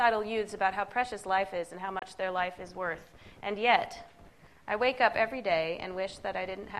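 A single digital broadcast dropout briefly mutes the audio at 1.99 s and restores it by 2.02 s, with a fast fade of about 3 ms into a 24 ms hole, consistent with one lost frame. On a spectrogram it appears as a narrow, full-height blank column; the waveform drops abruptly to silence.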